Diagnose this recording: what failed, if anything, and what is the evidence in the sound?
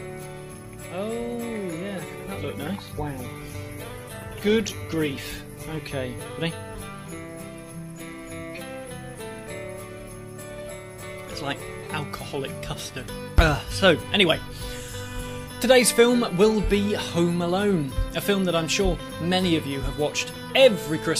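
Codec stage, set off by the network: a call bitrate drop from 2.06 to 6.01 s. The sound turns coarse and dull, top end shaved off, which fits the encoder being squeezed from around 96 kbps to about 14 kbps after the bandwidth estimate fell.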